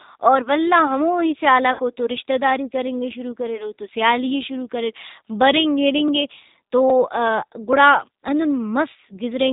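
Throughout the recording the speech passes through the G.729 codec at 8 kbit/s, and the damage is plainly audible: a slightly rough, synthetic quality as the decoder rebuilds each 10 ms frame from a vocal tract filter, a pitch predictor and a handful of pulses. On a spectrogram nothing appears above 4 kHz, leaving a hard ceiling across the whole clip, and the harmonics below it look smeared and grainy.

From 1.73 to 1.80 s, between "اور ولدا ہموہی" and "اوتو رشتہ داری کرنگے", there is VoIP packet loss concealed by the speech codec. About 60 ms of audio went missing, which fits six consecutive 10 ms frames, and the decoder filled the gap by repeating its last pitch and filter at falling gain. It is heard as a stretched buzzy tone or coloured noise that fades, and the following syllables are weak or distorted.

At 6.08 s, just before "اے تو", then at 6.90 s, just after the same words, and again at 7.73 s, there are single sharp clicks. 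These are likely dropped samples, with well under a millisecond missing each time, so the waveform jumps abruptly from one value to a later one with no sound lost. Each click shows as a step in the waveform and a thin vertical line running the full height of the spectrogram.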